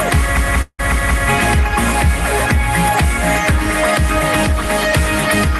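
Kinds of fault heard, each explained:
System hang loop: the computer or its audio driver stalled while the sound hardware kept replaying the same ring buffer, so one piece of sound about 186 ms long, which fits an 8192-sample buffer, repeats exactly five times at about 5.4 per second between 0.37 and 1.29 s. At that length it comes across as a machine-gun stutter, with the same fragment hammering over and over before normal audio resumes.
Long network dropout: the gap from about 0.61 to 0.81 s is likely caused by a stretch where no audio packets arrived. For roughly 173 ms the receiver extends the last sound it had, which fades away, leaving about 60 ms of silence. About 180 ms of audio is missing, and the sound picks up further on without that part. This falls inside the looping stretch, so the stutter is interrupted by a fading tail and a brief silence.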